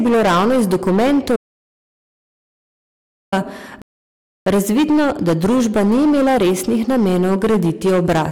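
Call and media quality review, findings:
Hard clipping, throughout. Speech driven about 13 dB past the ceiling of a gain or converter stage. Roughly a fifth of samples cut flat, adding harsh high harmonics. Constant fuzz on every loud syllable.

Audio dropout to silence, 1.36 to 3.32 s. Silence with no room tone, 1.96 s of speech lost, resuming mid-flow before "razvidno da družba ni". Likely input loss upstream, such as a device or link drop, with the encoder writing silence.

Rebuffering stall, 3.82 to 4.46 s. Playback halts to silence for 0.65 s, then continues exactly where it stopped, before "razvidno da družba ni". Player buffer underrun. Nothing is skipped, but time is added.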